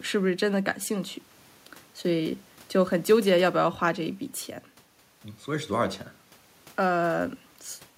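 A speech recording with nothing technically wrong to report.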